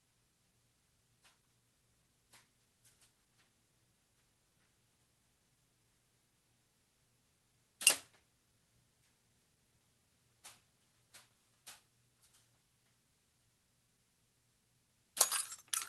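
The sender's clock runs faster than the receiver's, by roughly five percent, so this is clock drift between sender and receiver: audio arrives quicker than it is played out, and the jitter buffer keeps filling throughout the clip instead of holding a steady level.

From 0.11 s to 15.72 s, the receiver answers with repeated timing corrections, trimming short pieces to keep pace with a stream running at 105 percent. The cuts come unevenly spaced, so the audio has small hiccups and a faintly unsteady pace, under a band limit near 12 kHz that fits an Opus call link around 20 kbps.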